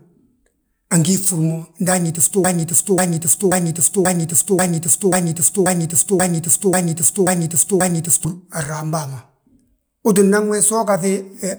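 From 2.44 to 8.25 s, a 0.54 s fragment of speech repeats eleven times: a broken-record loop, likely from a stalled player resending its last fragment.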